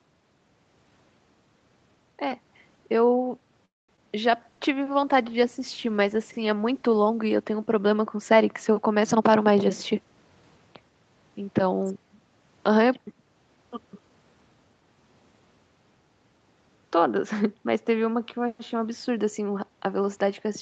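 At 3.65 s the sound hangs for 0.25 s, the last sound carried on briefly as a fading buzz, most of it silent, and then resumes exactly where it left off. It is a call audio freeze, likely packets held up in transit until the jitter buffer ran dry. Unlike packet loss, nothing is removed; a pause is inserted.

Right after, from 3.97 to 4.00 s, there is short concealed packet loss. About 20 ms of audio never arrived, and the receiver briefly extended the preceding sound before blending back. It is heard as a tiny smear or wobble, far shorter than the freeze, with real content gone.

From 4.35 to 10.06 s a call bitrate drop takes Opus from 48 kbps down to 14 kbps, staying at the bottom for about 2.9 s. The sound turns rough and watery, and, unlike the momentary glitches, the degradation persists for seconds.

From 9.12 to 10.59 s, overlapping the end of that coarse stretch, a jitter buffer speed-up plays the audio at 116% while keeping its pitch, trimming roughly a fifth of a second of pitch periods to shrink the backlog. 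It sounds hurried rather than higher, which distinguishes it from a simple playback-rate change.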